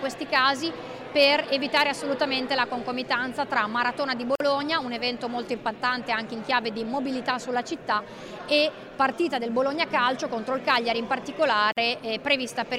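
A gap at a join of encoded pieces opens at 4.35 s and again at 11.72 s, gaps of 48 ms and 45 ms. The audio was encoded in separate pieces and joined without trimming, so each piece's start-up delay and the padding in its last frame remained. The continuous sound drops out, its edges smeared by the codec, then resumes where it left off.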